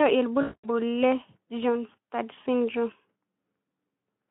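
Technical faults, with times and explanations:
0.41 to 0.68 s, VoIP packet loss concealed by the speech codec. About 220 ms of audio goes missing, which fits eleven lost 20 ms frames. The decoder fills the gap from its last pitch and filter shape. It lowers the gain frame by frame. The speech smears into a buzzy tone or coloured noise that fades away. Each frame builds on the one before, so the speech stays weak or distorted for tens of milliseconds or more after packets return.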